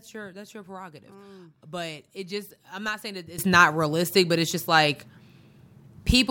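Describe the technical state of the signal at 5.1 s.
At 5.1 s the signal sits inside a sudden gain jump that begins at 3.38 s and holds to the end of the clip. Speech and background noise both rise together by about 16 dB in one step, most likely from a digital gain change applied without a ramp.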